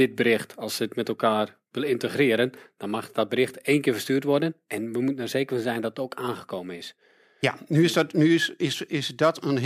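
Nothing here seems to go wrong technically: the speech runs along without any glitches, dropouts or other faults that a listener would pick up on.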